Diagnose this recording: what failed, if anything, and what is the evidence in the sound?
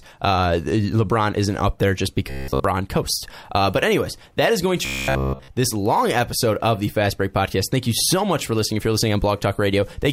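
The speech twice collapses into a rigid metallic buzz fixed at 66.8 Hz, from 2.30 to 2.64 s and 4.85 to 5.50 s, fully replacing the real audio. This robotic sound from repeated short buffers likely comes from driver or buffer starvation looping a block of about 15 ms.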